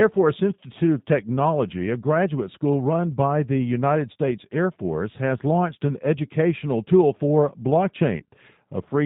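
Speech clip coded through the G.729 codec throughout, and you can plainly hear it. The whole thing is band-limited with nothing above 4 kHz, so it sounds dull and narrowband, and there's that slightly rough, synthetic edge you get when the voice is rebuilt from a vocal tract filter, a pitch predictor and a handful of pulses per 10 ms frame rather than the actual waveform. All of that fits an 8 kbit/s G.729 stream. Near the end, from about 8.18 to 8.23 s, there's VoIP packet loss concealed by the speech codec. It sounds like roughly 20 ms of audio went missing, most likely a single lost packet. The decoder papered over the hole by carrying its last pitch and filter forward at falling gain, so the sound smears into a short buzzy tone or coloured noise that fades. Because each frame builds on the one before, the distortion hangs on a little past the gap before the voice fully recovers.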